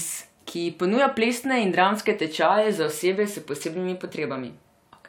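Nothing goes wrong anywhere in this bit of speech; it just runs along without a single glitch to point at.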